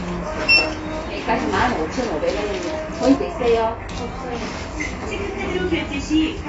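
Throughout the clip, the audio was likely squeezed through AAC compression at a low bitrate, with damage consistent with AAC-LC at around 24 kbps. The encoder discards everything above 7.7 kHz and coarsely quantises the rest, so the sound is dull and smeared, with plainly audible codec damage.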